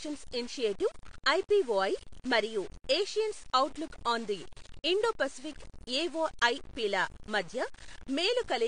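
Throughout, the speech was likely truncated to very few bits without dither, consistent with 6-bit depth. This is low bit depth without dither: grainy distortion about 20 dB below the speech tracks the signal.

AAC compression, likely at a low bitrate consistent with AAC-LC near 32 kbps, leaves nothing above 9.7 kHz and plainly audible codec damage, dulling and smearing the speech throughout.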